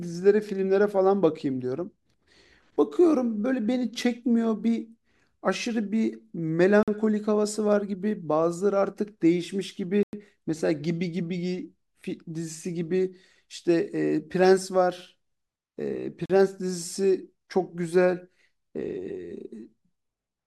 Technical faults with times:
6.83-6.88 Bluetooth stall
10.03-10.13 Bluetooth stall
16.26-16.30 Bluetooth stall

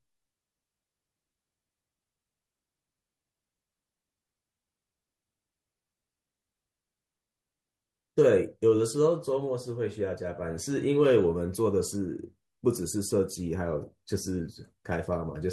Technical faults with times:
none

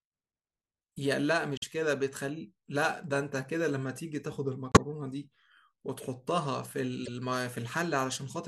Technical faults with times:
1.57-1.64 corrupt frame decoded
4.71-4.79 corrupt frame decoded
7.05-7.08 corrupt frame decoded

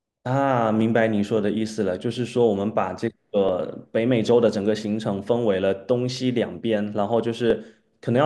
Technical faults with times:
0.81-7.50 clock drift buffer slips

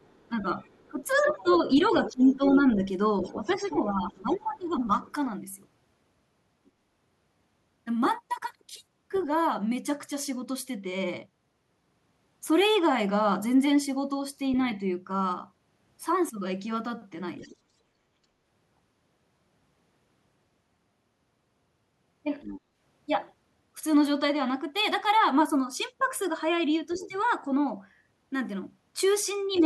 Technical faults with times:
0.00-9.22 other side's voice leaking through
0.29-4.80 speech suppressed in double talk
17.40-17.56 other side's voice leaking through
22.42-22.61 other side's voice leaking through
26.90-29.63 other side's voice leaking through
26.95-29.63 speech suppressed in double talk

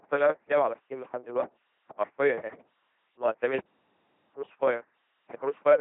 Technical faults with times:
0.00-5.81 LPC-10 vocoder
3.59-4.33 playback stall

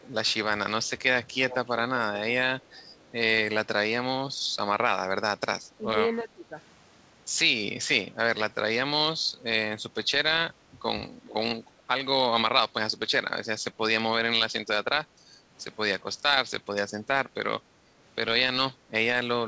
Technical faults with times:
0.02-0.06 echo leak
0.84-0.89 echo leak
1.50-1.56 echo leak
2.60-3.10 echo leak
5.78-5.94 speech suppressed in double talk
6.25-6.55 speech suppressed in double talk
11.26-11.34 echo leak

